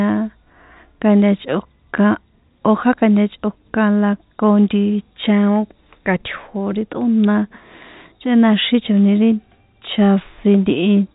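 Nothing's amiss in this bit of speech; it just has the familiar narrow sound of a G.711 A-law telephone line, with nothing coming through above 3.8 kHz.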